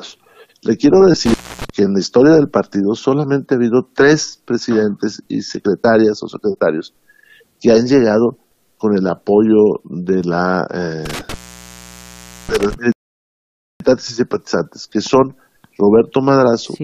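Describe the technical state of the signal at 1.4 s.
At 1.4 s the signal is inside an intermittent contact fault running from about 1.26 to 1.70 s, where a loose cable or plug briefly loses connection and the line goes open for roughly 280 ms. The sound cuts away with crackle at the break and again at the reconnection, and the gap holds faint hiss rather than true silence. That scratchy, noisy gap separates it from a clean digital dropout, which falls to dead silence with sharp edges.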